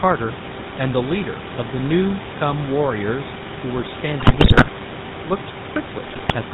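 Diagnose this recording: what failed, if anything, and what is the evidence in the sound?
The codec stage is at fault: the speech was carried through the GSM full-rate codec, consistent with its 13 kbps rate. The decoder rebuilds the speech from a vocal-tract filter driven by sparse, regularly spaced pulses, so the audio sounds plainly buzzy and gravelly throughout, with nothing above 4 kHz. Room noise sits about 13 dB below the speech.

The radio link also failed twice, letting GSM bit errors corrupt the filter, pitch and gain parameters reaching the decoder. From 4.2 to 4.7 s and 6.04 to 6.35 s the speech breaks into squawks, pops and gargling as frames decode with distorted spectra or jumps in level. The first burst is the more damaged.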